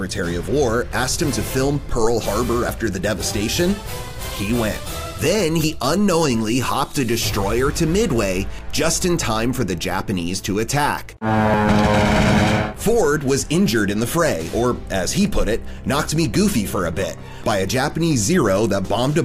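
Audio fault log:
17.44 s, audio missing between chunks: the recorder likely lost a short stretch, roughly 50 ms, while closing one 3-second chunk and opening the next. The two sides are joined directly with no silence between them, so the sound skips abruptly forward.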